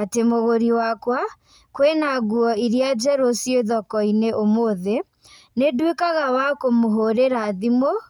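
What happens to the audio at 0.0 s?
Nothing goes wrong at 0.0 s; the audio is intact at that moment.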